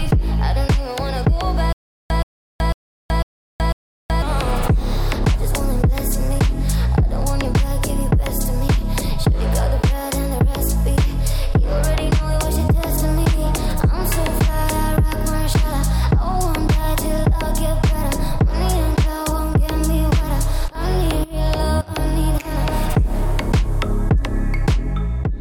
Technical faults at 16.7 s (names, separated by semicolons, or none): none